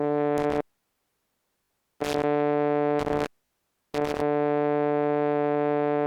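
The music drops out through an intermittent contact between 0.38 and 2.24 s. A loose plug or cable lets the signal path open for about 1.3 s in total. The level falls away with crackle at each break and reconnection, and only faint hiss remains while the line is open. Inside that stretch, from 1.64 to 1.70 s, a repeated buffer adds a different fault: one 20 ms slice of music plays three extra times with a hard join at each repeat. The result is a rapid buzzy stutter rather than a cut. The same contact fault returns from 2.99 to 4.22 s, this time open for about 0.6 s, again crackling at its edges. Within it, at 3.46 to 3.50 s, another 20 ms buffer is replayed twice more, giving a shorter stutter.

The two faults differ in what you hear during the fault. The contact fault leaves a gap filled with hiss, framed by irregular crackle. The buffer repeat never goes quiet: it loops the same few milliseconds of music with hard, regular joins, and nothing of the music is skipped.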